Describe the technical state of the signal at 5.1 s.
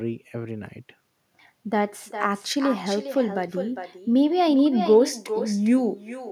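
At 5.1 s the speech is trailed by a quieter, thinner copy of itself arriving roughly 400 ms later and about 11 dB down. This echo with no canceller runs through the whole clip: the far end's loudspeaker feeds its microphone, and nothing removes the returned signal.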